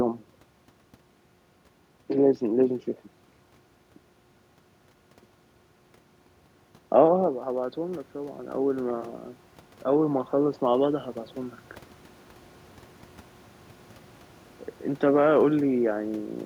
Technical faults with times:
6.97-9.09 automatic gain rising

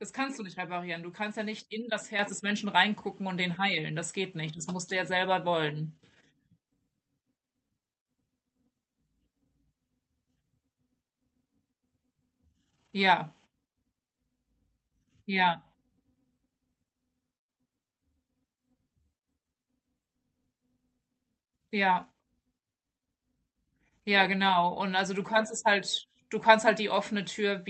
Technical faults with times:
2.19 microphone volume stepped up

